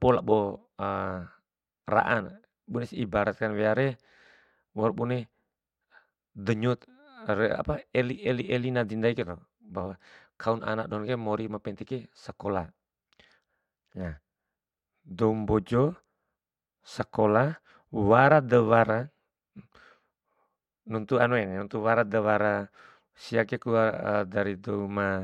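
No technical faults can be heard in the speech at any point, so there is nothing to place in time order.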